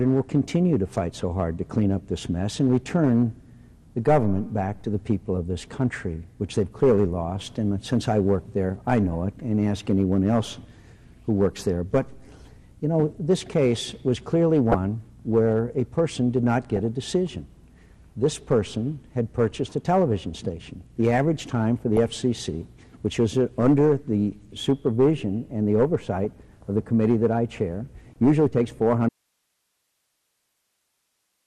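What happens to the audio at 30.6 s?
At 30.6 s the sound is inside an audio dropout to a faint residue that begins abruptly at 29.09 s and lasts to the end. The wanted signal has vanished, yet the path stays live, leaving only hiss about 50 dB below the normal level. That residual hiss and the hard cut, rather than a gradual fade or a natural pause, point to a likely loss of the source feeding a still-open channel. Across the whole clip, including this moment, there is also plainly audible MP2 compression, likely at a low rate that fits around 80 kbps. Starved of bits, the encoder switches whole upper sub-bands off and quantises the rest coarsely. The result is dull and gurgling, with bands flickering in and out, unlike the smoother swirl of other codecs.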